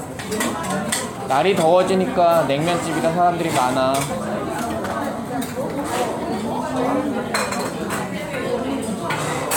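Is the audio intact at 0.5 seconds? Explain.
Yes, the sound is intact at 0.5 seconds, with no fault present at that moment.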